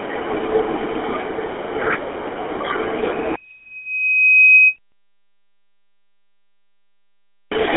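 GSM full-rate codec damage runs through the whole clip. The speech is squeezed into a telephone band of roughly 200 Hz to 3.4 kHz, with nothing above 3.7 kHz, and the pulse-driven vocal-tract model leaves a clearly buzzy, gravelly roughness that fits a 13 kbps GSM stream.

A loudspeaker feedback squeal runs from 2.98 to 4.77 s. The microphone picks up its own loudspeaker, and the loop gain passes unity at 2.5 kHz, so that single tone swells over about a second and a half until it stands around 10 dB above the speech.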